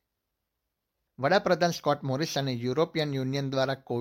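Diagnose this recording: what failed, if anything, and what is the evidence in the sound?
Nothing in the recording points to a failure at any stage of the chain. There is no audible evidence of a fault anywhere in the sound.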